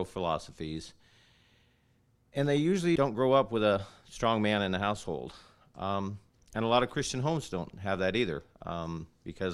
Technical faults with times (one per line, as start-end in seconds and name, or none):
2.95-2.97 skip ahead
3.04-3.73 jitter buffer speed-up
4.18-4.47 jitter buffer speed-up